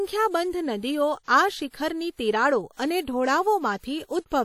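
A transform codec run at a low bitrate, likely WMA compression, has left plainly audible damage across this speech clip. Its long transform blocks smear quantisation noise over tens of milliseconds around each sound, so the speech rings and turns washy, with a hiss that swells and fades with the level. The degree of damage fits a bitrate around 48 kbps, and nothing remains above 19.1 kHz.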